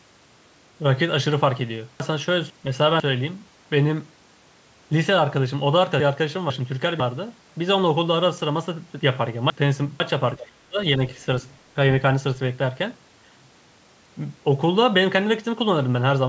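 Chunks out of order occur three times, at 2.0 to 3.0 s, 6.0 to 7.0 s and 9.0 to 10.0 s. Each time a half-second block of speech arrives one chunk late and plays after the block that should follow it. The sound jumbles briefly at the hard joins.

Speech suppressed in double talk follows at 10.37 to 10.78 s, where the talker dips by about 25 dB for roughly 0.4 s, and again more faintly at 10.97 to 11.01 s, a shallow dip of about 5 dB. The likely cause is an echo canceller treating overlapping talk as echo.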